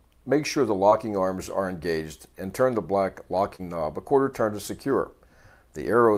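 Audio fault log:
3.55 to 3.61 s, short concealed packet loss: a brief smear or wobble as the sound loses its detail. About 40 ms of audio arrived too late, and the receiver filled 33 ms by extending the preceding sound, then blended back in.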